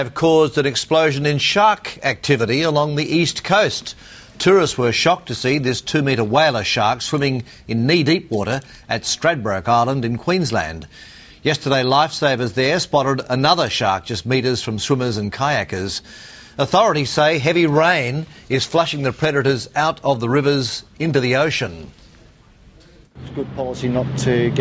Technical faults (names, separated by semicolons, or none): none